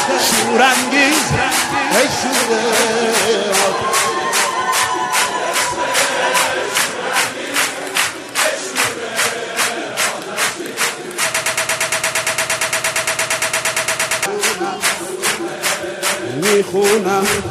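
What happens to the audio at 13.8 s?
At 13.8 s the sound is caught in a broken-record loop running from 11.35 to 14.26 s: a 115 ms fragment repeats back to back 25 times. The likely cause is a stalled player or stream resending the last chunk it held, so the audio meant for those three seconds is lost. Unlike an echo, each repeat is identical and never fades, and it persists far longer than a one-off stutter.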